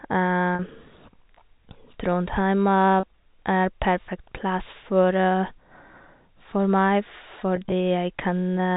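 Speech over G.711 telephone coding, band-limited to 4 kHz, with packet loss with pitch repetition at 0.55–0.59 s, 3.00–3.03 s and scattered across 7.56–7.72 s, where repeated pitch periods give brief buzzy, held sounds bridging the gaps.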